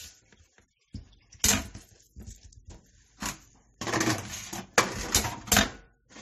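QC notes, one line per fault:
Throughout: transcoding between lossy codecs is the likely cause. Nothing sounds above 14 kHz, and two kinds of smeared, swirly artefact overlap rather than one. That layering, with the lowest cut-off kept, points to a low-rate MP3 pass re-encoded as AAC-LC near 48 kbit/s.
2.75 to 5.75 s: periodic USB or driver dropouts. About four tiny ticks, exactly 1.0 s apart, each about a millisecond of audio replaced by silence. The strict one-second spacing marks these as a blocked bus or driver, not random codec glitches or clipping.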